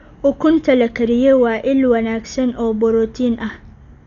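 Throughout, the speech sounds dull with nothing above 6.9 kHz. There's rough, fluttering noise around tones, likely heavy Dolby Digital compression, where starved frequency lines get filled with dither.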